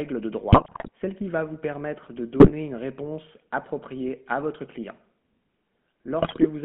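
The whole clip runs through the GSM full-rate codec, and you can plainly hear it. The band sits between roughly 150 Hz and 3.4 kHz, and the pulse-driven vocal-tract model leaves that buzzy, gravelly grain you'd expect from a 13 kbps full-rate stream.

Then come GSM bit errors, where corrupted filter, pitch and gain values scramble whole frames into squawks and gargling bursts. The first is from 0.52 to 0.89 s, just before "celle qui va vous". The next is shorter, 2.40 to 2.53 s, between "va vous permettre de" and "une réponse appropriée à". The last runs from 6.20 to 6.45 s.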